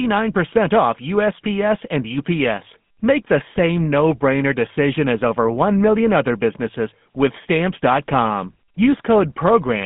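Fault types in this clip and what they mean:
GSM full-rate codec: The speech has a buzzy, gravelly roughness from start to finish, and the top end is missing entirely, with nothing above about 3.8 kHz and a narrow line band of roughly 150 Hz to 3.5 kHz. This comes from a vocal-tract model that is driven by evenly spaced pulses and keeps only a sparse share of the excitation. At around 13 kbps, which fits GSM full rate, the damage is plainly audible.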